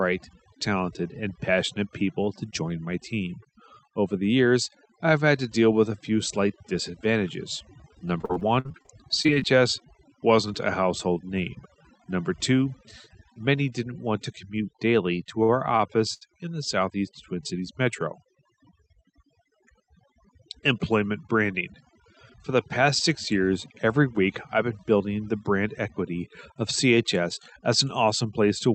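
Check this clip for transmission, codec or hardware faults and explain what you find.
Three kinds of fault are present in this speech: heavy-handed noise reduction throughout, a burst of packet loss, and a cluster of brief playback stalls. The Opus call path's high-frequency limit of about 8 kHz can also be heard.

Overdone noise removal runs through the whole clip. The noise suppressor was set so aggressively that any frequency band sitting close to its noise estimate gets pushed far down or switched off entirely, and the softer parts of the voice are caught along with the background. The gaps between phrases drop to near silence scattered with twinkling specks.

Repeated packet loss (robotic sound) appears from 8.21 to 9.43 s, just after "a few slight disadvantages". Over a dozen losses arrive in quick succession, the longest about 46 ms. The receiver patches each one by extending the preceding sound, so roughly a quarter of that stretch is filler and about 240 ms of real speech is gone. 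The passage sounds choppy, with fragments missing.

Short stalls from a late packet occur at 15.43 s (53 ms), then at 15.77 s (27 ms) and 16.13 s (78 ms), the last two both after "commute daily to our". Each time a packet missed its playout deadline, the jitter buffer ran dry and the last sound was stretched until the packet arrived. Playback then resumed where it left off. Nothing is lost, but a sound is held slightly too long, with a faint buzz or dip.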